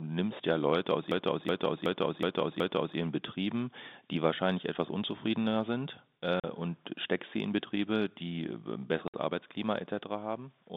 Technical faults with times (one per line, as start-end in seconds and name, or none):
1.11-2.97 system hang loop
6.40-6.44 packet loss filled with silence
9.08-9.14 packet loss filled with silence